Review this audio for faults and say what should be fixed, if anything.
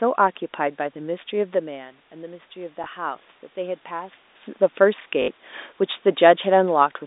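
Automatic gain rising from 1.61 to 4.24 s: after the level fell about 12 dB at 1.5 s, the gain crept up about 4 dB. The room noise swells along with the voice, which separates it from a talker simply moving closer. A slower, capped gain control, or correct microphone placement, would prevent this.

Packet loss with last packet repeated at 2.84–2.86 s (20 ms) and 5.22–5.28 s (60 ms): the last packet replays. The longer run buzzes at about 50 Hz, which fits 20 ms packets, rather than falling silent like a plain dropout. A jitter buffer with proper concealment, or forward error correction, would prevent this.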